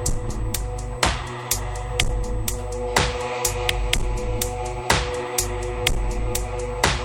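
A steady USB whine runs from start to finish, pinned at 8 kHz and sitting roughly 35 dB below the main sound. That pitch matches the 125 microsecond microframe rate of a high-speed USB link, whose current bursts are leaking into the audio through a shared power or ground path. It comes across as a thin, fixed, high-pitched tone. On a spectrogram it forms an unbroken horizontal line at 8 kHz across the whole clip.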